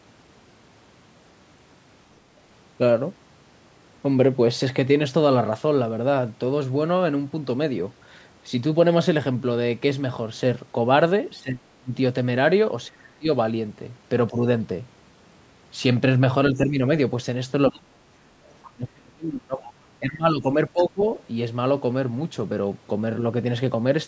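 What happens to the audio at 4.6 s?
Nothing goes wrong at 4.6 s: the speech there comes through intact, carried by ordinary call microphone processing with nothing above 8 kHz.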